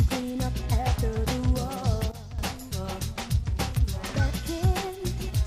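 At 2.12 s a sudden gain jump drops everything, sound and background noise alike, by about 12 dB until 2.39 s, when the level snaps back. The cause is likely a digital gain change applied instantly without a ramp. The waveform shows a rectangular step in its envelope; the spectrogram shows a dimmed band across all frequencies.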